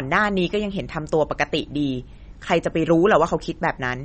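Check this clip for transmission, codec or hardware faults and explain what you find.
One codec fault runs through the whole speech clip: MP3 compression. Nothing is present above 8.4 kHz, and the damage is plainly audible, with watery, swirling texture and metallic chirps on s sounds. The likely cause is a starved MP3 encoder, consistent with about 32 kbps, cutting the treble and dropping weak frequency lines frame by frame.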